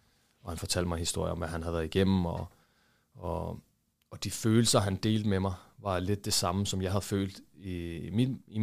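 No technical faults are audible.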